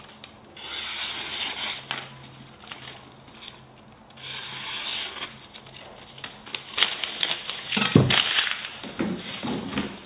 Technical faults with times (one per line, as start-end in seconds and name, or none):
none